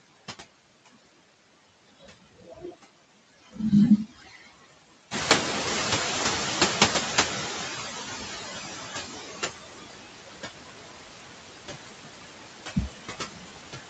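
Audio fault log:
Throughout, noise suppressor artifacts: the background is pulled down frame by frame wherever the suppressor judges it steady noise, so it sinks between words and rises under them.
1.81–3.59 s, 4.06–5.1 s, 6.92–8.24 s, 8.6–9.34 s, 9.77–11.2 s, 11.64 s to end, speech cut by the noise suppressor: soft consonants and word endings are treated as noise and dropped with it, by as much as about 22 dB (about 14 dB at 6.92 s). They sound swallowed or faint.
5.11–9.23 s, noise suppressor catching up: the room noise jumps by about 11 dB near 5 s, and the suppressor's noise estimate lags. The louder background comes through with less reduction at first, then sinks gradually over roughly 4.1 s until about 18 dB of cut is restored.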